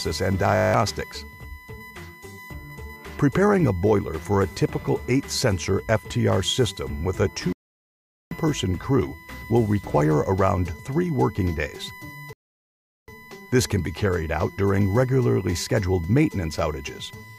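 A USB whine runs throughout, a fixed 1 kHz tone strongest at 2 kHz, about 20 dB below the sound, unlike mains hum, which sits far lower.

From 0.56 to 0.74 s a system hang loop repeats one 20 ms slice nine times, buzzing at 50 Hz while about a fifth of a second of audio is lost.

Rebuffering stalls drop into silence from 7.53 to 8.31 s and from 12.33 to 13.08 s, adding 787 ms and 750 ms. Unlike dropouts, the sound resumes exactly where it stopped.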